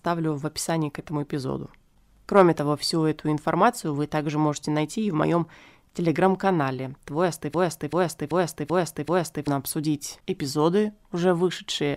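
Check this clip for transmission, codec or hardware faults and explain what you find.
There's one clear fault in this speech clip, a broken-record loop. From 7.54 to 9.48 s, the same 0.39 s fragment plays back to back five times, so you hear a short stutter cycling with perfectly identical repeats before normal playback picks up again. The likely cause is a stall somewhere in the player, encoder or stream that kept resending the last chunk it held, and whatever speech belonged in those two seconds is simply gone.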